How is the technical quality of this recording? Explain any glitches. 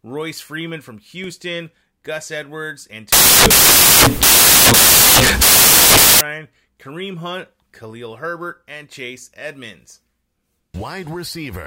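One glitch spoils the recording: samples built from the wrong bytes, from 3.13 to 6.21 s. Across that stretch the reader pairs each sample's bytes incorrectly, so the rapidly fluctuating low-order bits end up as the most significant part of every value. Loud, harsh broadband noise fills roughly three seconds before clean audio returns at 6.21 s.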